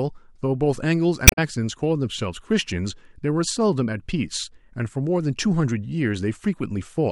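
From 1.24 to 1.38 s, damaged data in the compressed stream knocks the decoder out of sync. The result is a brief glitch, heard as a chirp, squawk, click or short hole.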